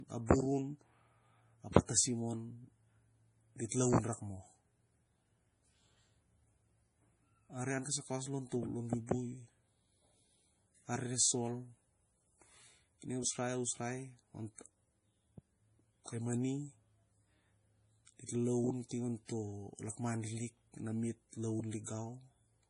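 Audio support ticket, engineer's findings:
Whole clip, speech. Low-bitrate audio saved at a high bitrate: nothing above 10.5 kHz, with dull, smeary codec artefacts baked in. Likely an MP3 at around 32 kbit/s, re-encoded as a big high-bitrate MP3. The second pass can't bring back what the first one threw away, so the cut-off and the mush stay put. We need an earlier source.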